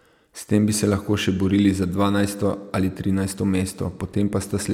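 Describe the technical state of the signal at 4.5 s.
Nothing is wrong with the signal at 4.5 s; the speech carries on intact at that point.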